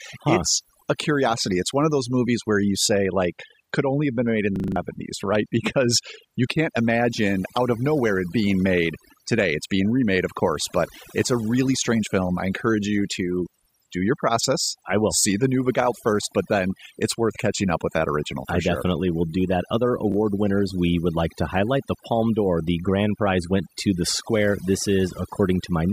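Throughout the speech, overdone noise removal is at work: a noise reduction stage set too strong pulls individual frequency bands down or off whenever they sit near its noise estimate, taking quiet parts of the voice along, so the background breaks into twinkling, warbling specks.

From 4.56 to 4.76 s, just after "have been made in", a system hang loop occurs: the system froze while the audio hardware kept cycling one 40 ms buffer, so that piece repeats exactly five times at 25 Hz, a rapid mechanical repetition replacing about a fifth of a second of speech.

At 20.1 to 20.14 s, just before "winners we would like", there are chunks out of order: a 20 ms chunk arrived one chunk late and plays after the one meant to follow it, so nothing is lost but three hard joins create a brief jumbled moment.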